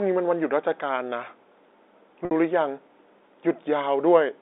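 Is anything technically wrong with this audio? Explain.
Yes. Packet loss with pitch repetition occurs at 2.25 to 2.31 s. The 60 ms gap is filled by repeating the last pitch period, so the speech briefly holds on a buzzy tone.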